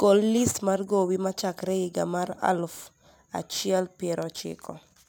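Aliasing runs through the whole speech clip: the sample rate was reduced without an anti-alias filter, so content above a 16 kHz fold point, which fits a drop to 32 kHz, mirrors back as false tones about 25 dB down, making sibilants gritty and metallic.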